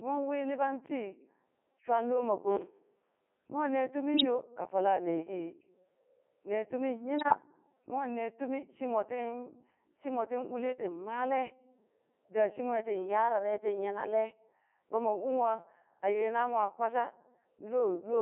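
Speech, passed through a Codec 2 vocoder at 3.2 kbit/s, and it sounds heavily processed: robotic and buzzy, confined to roughly 300 Hz to 3.5 kHz. The decoder rebuilds the voice from pitch, voicing and envelope parameters, so the real waveform is gone. There are also two bursts of bit errors on the digital voice radio link, at 4.14 to 4.26 s and 7.18 to 7.38 s. At an error rate of a few percent, the corrupted frame parameters make the voice jump in pitch and level and break into warbly gibberish.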